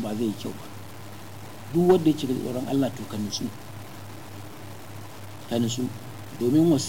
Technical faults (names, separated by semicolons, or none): low bit depth without dither